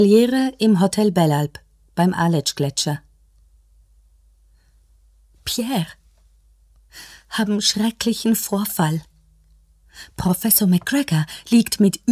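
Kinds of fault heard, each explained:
No kinds of fault are heard in this clip.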